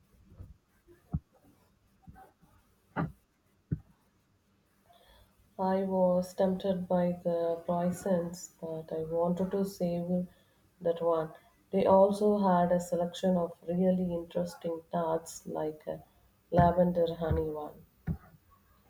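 No technical fault can be heard anywhere in the speech recording; the signal stays continuous and intact throughout.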